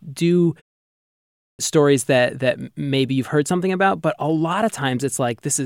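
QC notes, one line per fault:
0.99–1.59 s, clipped start after a pause: following a 0.46 s silence, the output path had gone idle and needed time to wake, so the first 0.6 s of speech is lost and the sound resumes abruptly mid-onset.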